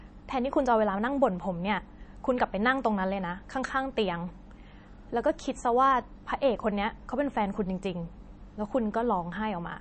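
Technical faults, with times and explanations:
Throughout, MP3 compression: a low bitrate, likely around 32 kbps, starves the encoder, so it drops everything above 8.3 kHz and zeroes weak frequency lines that flicker frame to frame, leaving the speech dull, watery and swirly, with smeared consonant attacks.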